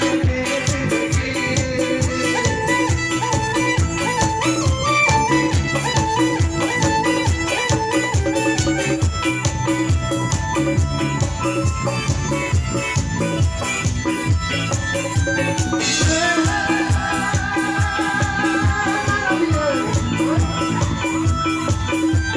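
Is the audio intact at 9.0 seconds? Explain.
Yes, the audio at 9.0 seconds is intact, with no dropout, click, distortion or other fault at that moment.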